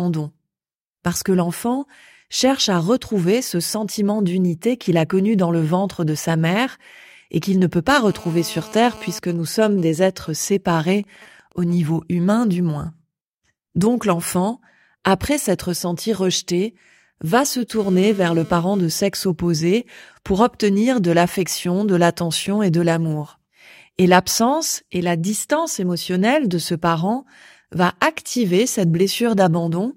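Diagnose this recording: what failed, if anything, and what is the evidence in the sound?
GSM phone buzz in the analogue wiring: a raspy 217 Hz buzz at 8.11–9.19 s after "qu'il ne peut pas" and 17.79–18.79 s, as the circuit rectifies a nearby 2G phone's radio bursts.

GSM signalling bursts on the same analogue path: even ticks with a longer 217 Hz buzz twice a second, roughly 25 dB down, from 9.24 to 11.74 s, just before "humain du moins".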